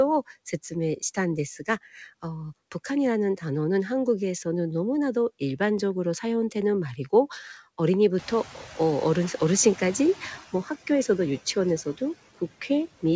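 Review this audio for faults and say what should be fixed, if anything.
Noise suppressor artifacts, throughout: the suppressor cuts steady-noise bands by about 14 dB frame by frame, so background noise pumps between and under the speech. Prevent this with gentler suppression depth and smoother gain changes across frames.

Noise suppressor catching up, 8.18 to 10.35 s: when room noise jumps by about 20 dB near 8 s, the suppressor's noise estimate lags. The louder noise passes with only about 8 dB of reduction until the estimate adapts over 2.17 s. Prevent this with faster noise-floor tracking that reacts to sudden level rises.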